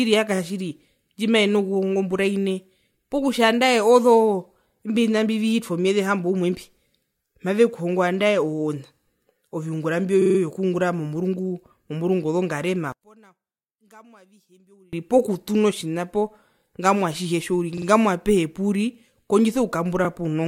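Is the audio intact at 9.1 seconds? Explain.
Yes, at 9.1 seconds the speech plays through intact, with no dropout, click, distortion or other fault at that moment.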